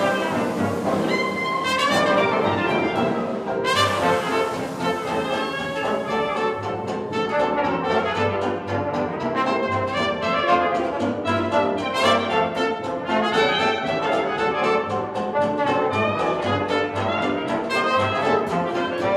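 No technical faults can be heard anywhere in this recording.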